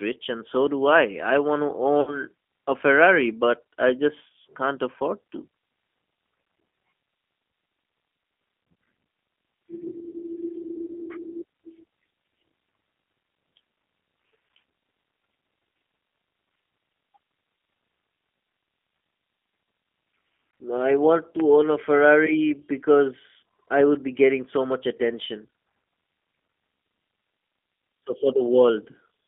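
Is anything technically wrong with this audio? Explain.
Yes. The whole clip carries G.729 codec damage, and one short dropout is concealed by the codec.

Throughout, the audio is confined to roughly 200 Hz to 3.4 kHz and sounds rough and slightly synthetic. The decoder rebuilds each 10 ms frame from a vocal-tract filter, a pitch predictor and a few pulses. This fits a G.729A stream at 8 kbit/s.

From 2.01 to 2.20 s there is VoIP packet loss concealed by the speech codec. About 60 ms of audio is missing, which fits three lost packets. The decoder stretches its last pitch and filter into a fading buzzy tone or coloured noise, and the following frames stay weak until they recover.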